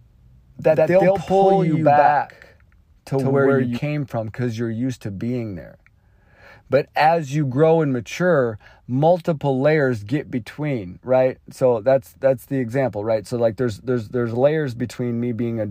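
From the start to 3.78 s, ending abruptly before "from because you're used", the speech has a doubled audio track: an equally loud, dry slap-back copy trailing by roughly a tenth of a second, likely from a slower second capture path. A spectrogram shows every syllable repeated full-band about 100 ms later.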